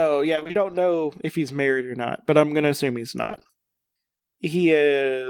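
Repeated packet loss (robotic sound) occurs twice in this speech. From 0.35 to 0.55 s, just before "know if he's married", a quick run of brief dropouts, none longer than 20 ms, is patched by extending the preceding sound, so about half that stretch is synthetic. Again from 3.23 to 3.51 s, after "going to assume he's", gaps up to 60 ms leave over half concealed, giving a choppy texture with pieces missing.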